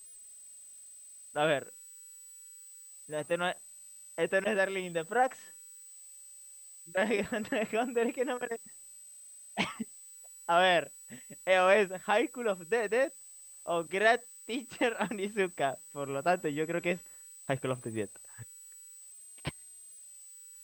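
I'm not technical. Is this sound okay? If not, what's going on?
No. There's a thin, high whistle, around 7.9 to 8.2 kHz, running under the speech the whole way through. That's a switching supply whistle: a switching power supply is running at a pitch you can hear.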